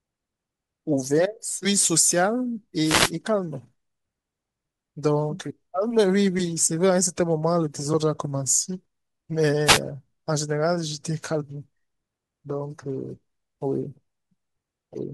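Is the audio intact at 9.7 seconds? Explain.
No. From 9.65 to 9.80 s the speech is hit by a wireless microphone noise hit: the FM radio link fades as multipath reflections cancel, receiver noise rises over the signal, and a brief burst of static swishes across the audio for about 0.16 s.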